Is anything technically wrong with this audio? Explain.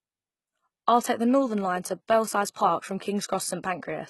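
Yes. Throughout, the treble sounds synthetic and gritty, with nothing above 11.8 kHz. This is likely HE-AAC compression at a very low bitrate near 16 kbps, rebuilding highs by spectral band replication.

Pre-echo at 2.53 to 2.56 s: quantisation noise spreads across the transform block, so a short hiss of about 27 ms precedes the attack and softens it.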